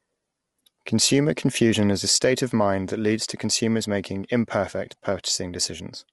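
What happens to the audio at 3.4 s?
At 3.4 s you're hearing the same roughness that runs through the whole clip: grainy, noisy speech with nothing above 11.6 kHz. That's likely low-delay AAC compression, where short frames smear pitch harmonics, and the damage fits a low bitrate around 32 kbps.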